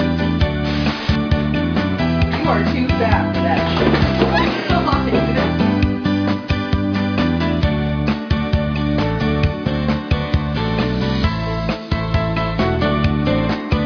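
No technical faults occur at any point in the audio.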